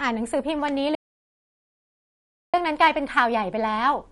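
Throughout, the speech sounds watery and swirly with nothing above 11.2 kHz, plainly audible MP3 compression damage, likely from encoding at a low bitrate such as 48 kbps. From 0.95 to 2.54 s the sound cuts to total silence for 1.58 s with no room tone, an audio dropout to silence, likely from lost input while zeros were recorded.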